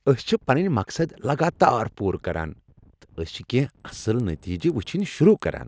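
Speech, where from 3.6 s to the end at 5.67 s the resampler restarted on every block. It appears to convert each 100 ms chunk on its own, in what sounds like a 44.1 kHz to 16 kHz conversion, without the neighbouring samples it needs at the chunk boundaries. Each edge therefore carries a small error, and the result is a steady ticking at 10 Hz laid over the voice, present only while there is signal.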